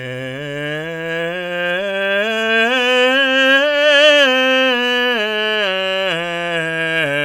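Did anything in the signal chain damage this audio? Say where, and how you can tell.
No, nothing audible in this music points to damage at any stage of the signal chain.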